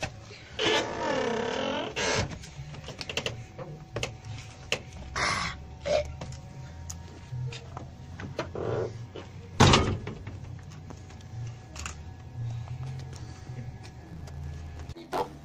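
From 14.00 s to the end at 15.44 s, the audio shows a block size mismatch (truncated): the tail of every block is discarded before the next stage reads it. A buzz appears at about 91.9 Hz, and the sound runs 1.07 times fast at roughly its normal pitch, which fits 512-sample blocks being cut short. A spectrogram would show evenly spaced vertical striations at that rate, and the waveform would show small jumps every 10.9 ms.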